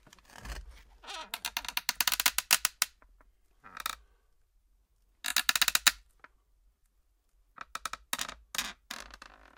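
No technical faults are audible.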